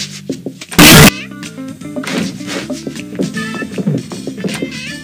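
From 0.79 to 1.09 s, the 8-bit samples were likely read with their sign convention swapped, signed and unsigned mixed up, so the top bit of every sample is flipped. Each crossing through zero turns into a jump from one end of the range to the other. For those 0.3 s the sound becomes a blast of very loud, harsh distortion, with quiet moments pushed up as loud as everything else, before the ordinary 8-bit sound returns.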